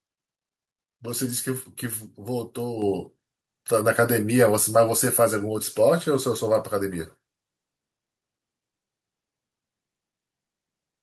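Speech that jumps abruptly louder at 2.82 s, voice and background together by about 6 dB: a microphone volume step-up, where the call software raised the input gain at once.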